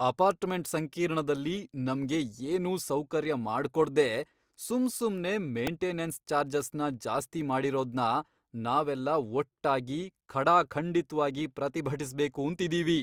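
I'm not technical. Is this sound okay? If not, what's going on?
No. At 5.67 s, right after "ಏನೂ ಸೌಕರ್ಯ ಮಾಡ್ಕೊಡ್ದೇ ಸುಮ್ಸುಮ್ನೇ", there's a repeated buffer. Fresh audio arrived late, so the device replayed its last tiny chunk, about 1.33 ms long, four extra times. Because the chunk is so short, this sounds like a quick click or buzz, and essentially no speech is lost.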